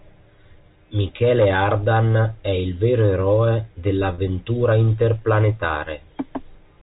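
Packet loss with pitch repetition occurs at 4.14 to 4.18 s, right after "è il vero eroe". About 40 ms of the speech goes missing, which fits two 20 ms packets. The receiver fills the gap by repeating the last pitch period, so the sound briefly holds on a slightly buzzy tone before normal speech resumes through the narrowband G.711 telephone channel.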